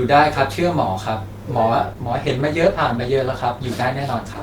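At 1.85 s the speech abruptly switches to an adaptive stream at a lower bitrate, with no gap, and stays degraded to the end. Codec artefacts rise, which fits a slowed connection forcing Opus from roughly 64 down to 16 kbit/s.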